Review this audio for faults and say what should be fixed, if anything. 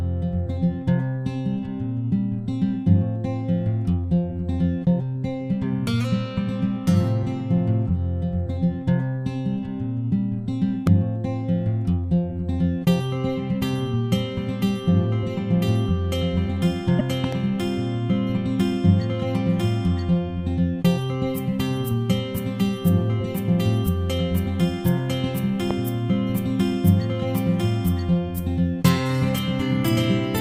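There are three loud pops, at 10.87–10.89 s, a double one at 17.24–17.35 s, and 25.71–25.73 s, each sitting roughly 10–15 dB over the sound, likely voltage spikes from a plug, switch or static. Check cabling and switching.

At 16.98–17.01 s there's a short garbled blip, likely a broken MP3 bit reservoir, where a cut frame, around 24 ms, left the next frame reading the wrong data. Edit or cut the decoded audio, not the MP3 stream.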